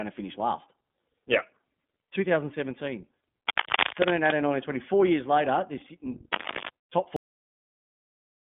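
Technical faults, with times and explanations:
Throughout, iLBC codec: the speech passes through a narrowband voice codec that codes each 20 ms frame on its own. That independence gives the voice a slightly rough, synthetic grain, plainly audible here, and nothing above about 3.7 kHz survives, so sibilants lose their hiss and the sound is boxed into a telephone-like band. The frame-by-frame coding, rather than a simple low-pass filter, is what separates this from plain bandwidth limiting, which would stay smooth.
3.47 to 4.33 s, cable scratch noise: for just under a second, dense, irregular bursts of scratching and rustling sit on top of the speech, at about 5 dB above it. The likely cause is a worn cable or connector being moved, its contact resistance jumping about quickly. Unlike steady hiss or hum, the noise is ragged and uneven, and it starts and stops with the disturbance instead of running under the whole clip.
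7.16 s, cut-off end: the speech stops abruptly in mid-sound and drops straight to digital silence, with no decay or room tail, and the rest of the clip stays silent. This points to the last stretch of audio never having been written or played out. A natural ending or a fade would trail off gradually, but here the sound is sliced off at one instant.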